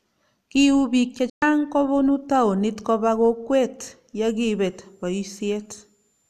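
At 1.30 s the speech drops abruptly into silence, fading out in only about 3 ms, and stays gone until 1.42 s. About 120 ms of programme is missing, and the sound resumes mid-stream rather than picking up where it left off. This is a digital broadcast dropout. The receiver stopped getting usable frames, either because the signal was lost or because the frames failed their checksum, so it muted its output. The length of the gap fits roughly five lost frames. Whatever was transmitted during that hole never reached the listener.

From 4.24 s to the end of the clip, a thin, high whistle sits faintly under the speech, far quieter than the voice. Its pitch wanders between about 7.08 and 7.44 kHz instead of holding steady. This is a switching supply whistle. A switching power supply has dropped into an audible burst mode or is beating against another supply, and its frequency shifts as the load changes, which is why the tone drifts.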